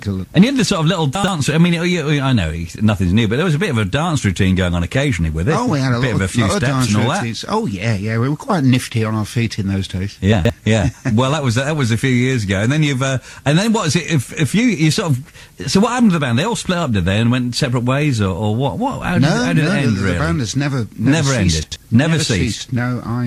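Three short jumbled moments interrupt the audio, at 1.15 to 1.28 s, 10.33 to 10.50 s and 21.63 to 21.76 s. Each is chunks out of order: a block of about 42.67 ms plays late, two blocks behind at the first and last points and three at the middle one. No audio is lost, but the sequence is scrambled, and there are three hard joins around each displaced block.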